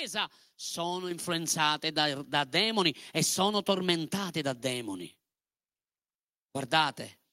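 At 1.11 s the microphone volume is stepped up. The level jumps by about 6 dB in a single step, and the speech and the background noise rise together. That shared rise points to gain applied at the input device, not to the talker getting louder. The call software judged the microphone too quiet and raised its input volume at once. It did not ramp the change. The jump is heard as a sudden shift.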